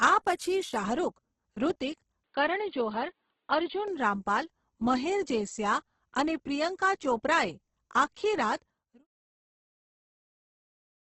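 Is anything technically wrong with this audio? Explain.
Yes. Two faults can be heard in this speech.

Throughout the clip there is heavy Opus compression damage. The sound is likely from the music (CELT) mode at a low bitrate, around 12 kbps. Band energy is kept but the detail is rebuilt with folded or noisy filler. Tones turn grainy and rough, and nothing reaches above 12 kHz.

From 2.24 to 3.88 s the input likely switched to a poorer device. That path passes a much narrower band, cutting everything above 4.5 kHz. The sound turns dull and boxy, then opens up again. There is no gap at the switch, the level holds steady, and only faint new background noise appears.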